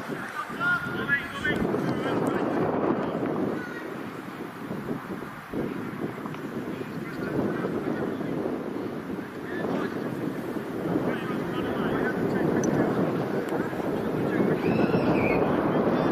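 No faults detected anywhere in the clip.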